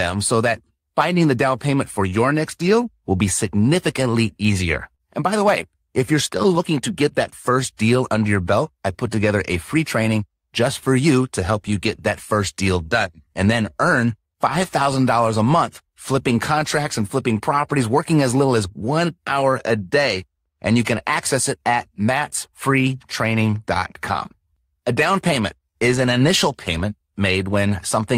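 The sender's clock runs roughly 3% slow against the receiver's throughout this speech, a clock drift between sender and receiver. The receiver's jitter buffer keeps draining, so the receiver has to keep stretching the audio to stay in step, and small timing hiccups recur at uneven intervals across the clip.

From 0.36 to 4.54 s, repeated timing corrections play the speech at about 97% speed, padding in roughly 150 ms through small repeated pieces. Each insertion is slight, and together they give a faintly dragging, uneven tempo rather than distinct clicks.

Between 4.95 and 5.02 s there is a short stall from a late packet. The buffer ran empty, and the last sound is held for 45 ms until the packet arrives. The speech then continues from the same place with nothing lost, leaving a brief sustained sound with a slight buzz or dip.

The repeated timing corrections resume at 6.49 s and continue to the end, again at 97% speed. 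Around 0.7 s is stretched in over this longer span, producing the same scattered hiccups and a slightly unsteady, slowed pace.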